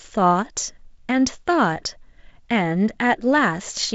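Listening to this speech clip, which comes through G.722 wideband telephone coding at 48 kbit/s, nothing stood out as a technical problem.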